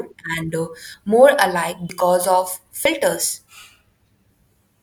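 Speech, with audio missing between chunks: roughly 40 ms skips at 1.90 s, just after "and uh more alike", and at 2.85 s, about a second apart, likely from 1 s processing chunks. Unlike a dropout, the sound on each side is butted together with no silent gap.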